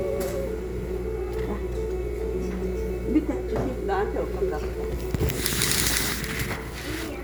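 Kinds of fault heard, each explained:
No faults can be heard.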